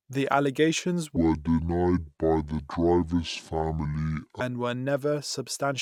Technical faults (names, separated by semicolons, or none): section at the wrong speed